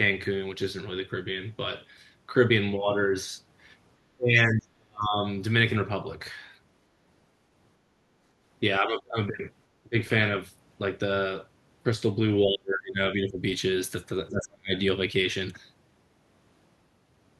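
An echo canceller likely mistook the talker for loudspeaker echo while both sides spoke and turned both down. The result is speech suppressed in double talk: the speech dips or drops out at 4.16–5.15, 8.8–9.17, 9.83–9.95, 12.45–12.99, 13.15–13.41 and 14.3–14.72 s, at worst by about 40 dB.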